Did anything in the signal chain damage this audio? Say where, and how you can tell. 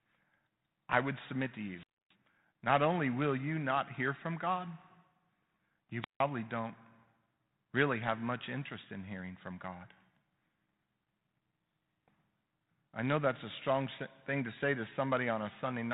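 Yes. At the wireless link, the radio signal faded until the receiver's squelch muted it: wireless microphone squelch dropouts at 1.72 to 2.15 s and 6.00 to 6.20 s, each a hiss rise and then a silent hole of 0.27 s and 0.16 s.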